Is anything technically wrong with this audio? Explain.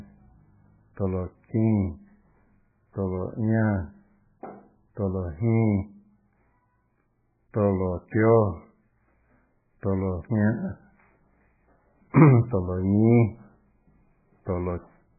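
Yes. Throughout the speech there is heavy damage that points to MP3 compression as the likely cause, consistent with a very low bitrate of around 8 kbps. Starved of bits, the encoder discards everything above 2.5 kHz and drops weaker frequency lines that flicker in and out frame by frame, so the sound is muffled, watery and swirly, with smeared consonants. A spectrogram shows a hard ceiling at 2.5 kHz and patchy, blocky holes below it.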